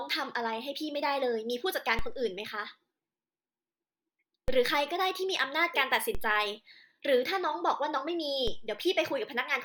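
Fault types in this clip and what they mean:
DC step: the waveform's zero line abruptly jumps to a new level, about -22 dBFS at 1.99 and 4.48 s and about -24 dBFS at 6.15 and 8.48 s, then slides back as a 2 Hz high-pass drains it. Each jump gives a low thump under the unchanged speech. On a waveform the trace lifts off centre and curves home; a spectrogram shows a brief broadband smear strongest at the bottom.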